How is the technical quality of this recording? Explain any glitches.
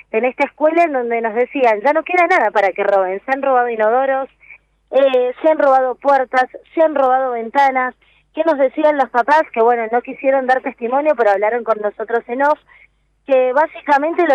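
Three quick clicks stand out, at 5.14, 7.06 and 11.34 s. They're likely dropped samples: just a few go missing, the waveform jumps, and you hear one sharp tick.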